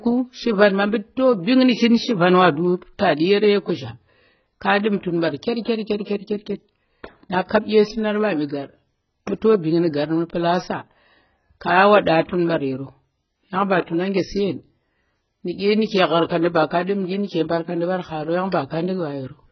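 Throughout the speech there's a hard ceiling at 6 kHz and smeared, fizzy sibilants, likely heavy AAC compression starved at roughly 12 kbps.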